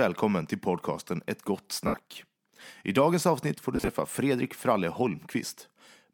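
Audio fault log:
1.87–1.94 s, lost LE Audio frames: a 70 ms gap, consistent with about seven 10 ms LC3 frames, is filled by the decoder repeating the last spectrum with randomised signs and fading it. Harmonics smear into a noisy band on a spectrogram, and the waveform envelope tapers.
3.76–3.88 s, lost LE Audio frames: 90 ms of losses scattered over 120 ms, in short bursts of around 30 ms at most. Each burst leaves a brief noisy patch, visible as blurred vertical stripes between intact harmonic sections.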